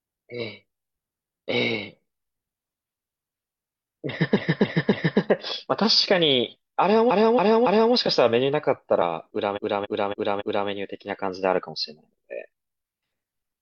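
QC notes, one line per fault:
4.32–5.16 s, 7.06–7.90 s and 9.52–10.64 s: repeated frames. The same 278.6 ms block of speech plays again, three, three, then four extra times, so it stutters.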